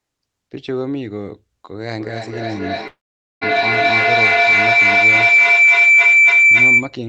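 A speech recording carried over a call codec whose high end stops near 8 kHz, it develops a feedback howl from 1.99 s to 7.02 s: a tone around 2 kHz swells to about 14 dB above the speech, pulsing roughly every 300 ms. Unlike ordinary echo, the repeats grow rather than fade, narrowing onto one pitch because the room loop between two devices adds gain each pass. From 2.87 s to 3.43 s comes a long network dropout, likely from lost packets. The last sound stretches into a fading buzz, then most of the half-second falls silent before speech resumes with that portion missing, which distinguishes it from a clean mute or brief glitch.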